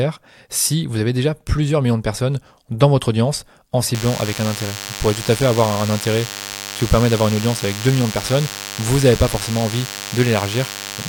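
From about 3.94 s, right after "dans votre audience en", a DECT cordless phone buzz comes in and stays to the end. A nearby handset or base is firing radio bursts 100 times a second, and the audio circuitry rectifies them into a thin, steady, harmonic-rich 100 Hz buzz sitting fairly loud, roughly 10 dB under the speech.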